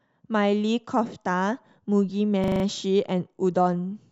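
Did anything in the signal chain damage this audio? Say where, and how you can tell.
Yes: a system hang loop at the driver/buffer stage, 2.44 to 2.64 s. One 40 ms slice of speech repeats exactly five times, a 25 Hz buzz. The waveform shows identical copies, the spectrogram a tiled block. The host stalled while hardware replayed its ring buffer.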